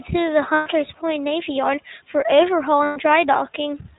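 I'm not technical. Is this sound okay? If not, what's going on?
No. The whole clip has passed through the iLBC codec, a phone-call codec that throws away everything above 4 kHz. The speech sounds muffled and a little rough and robotic. This damage is plainly audible from start to finish.

There are also two moments of lost iLBC frames. Pieces of the call went missing, each about 120 ms long. The decoder filled them by repeating the last bit of sound. It is heard as a short buzzy, held hum at 0.54 to 0.68 seconds, after "to the", and at 2.84 to 2.98 seconds, after "for overhaul". The speech returns to normal right after each gap.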